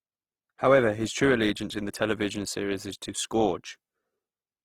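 Throughout the speech, the likely cause is Opus compression in its music (CELT) mode, starved of bits in a way that fits a rate near 16 kbps. Band energies survive but their detail is filled in, so the full-band sound turns plainly grainy, rough and noisy.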